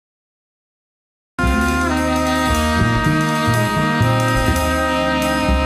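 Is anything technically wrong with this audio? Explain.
Yes, the clip has a cut-off start. The capture or stream came in late, so the first 1.39 s hold only digital silence and the audio then enters at 1.39 s already partway through a sound. Because the recording joined mid-event rather than at its beginning, there is no natural onset or fade-in: the level jumps straight from nothing to full signal, and the opening of that sound is simply missing.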